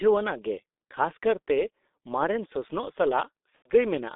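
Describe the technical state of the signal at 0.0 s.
Right from 0.0 s the speech is already going through the G.723.1 codec, and that holds for the whole clip. The band is squeezed to roughly 250 Hz to 3.7 kHz, so it sounds thin and muffled, and the damage is heavy: a hoarse texture with smeared consonants. That fits a low-rate coder around 6 kbit/s working in 30 ms frames and only slowly updating its model of the voice.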